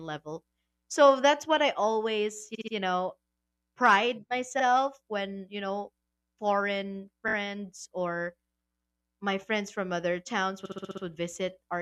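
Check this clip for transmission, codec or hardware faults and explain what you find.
The speech stutters four times from repeated frames. At 2.54–2.73 s, after "that's what I always", a 64 ms block plays three extra times; at 4.59–4.63 s a 43 ms block repeats once; at 7.27–7.34 s, after "when you know foreign", a 21 ms block repeats three times; and at 10.64–11.03 s, after "my friends from other", a 64 ms block loops six more times. Each replay is heard as a jerky catch in the speech. The cause is compressed frames sent or written more than once, so the decoder replays the same slice of audio, which adds about 0.68 s to the clip.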